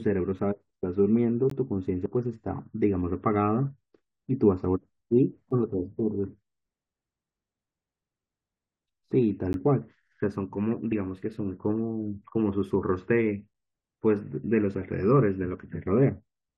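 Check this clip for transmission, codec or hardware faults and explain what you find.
Two kinds of fault turn up in the speech, both at segment or chunk boundaries.

Gap between stream segments at 1.50, 5.51, 9.53 and 13.54 s: four short silent holes with hard edges, about 15, 5, 12 and 10 ms long, spaced 4 s apart. The timestamps of consecutive 4 s segments don't quite meet, so the player pads the difference with silence. Nothing is lost; the sound just stops dead for a moment and resumes.

Audio missing between chunks at 2.06 and 5.01 s: here the speech jumps rather than pauses, with around 50 ms gone each time and the two sides butted together. The 3 s spacing suggests the likely cause is a chunked recorder or processor dropping a slice while it hands over from one block to the next, so you hear a skip instead of silence.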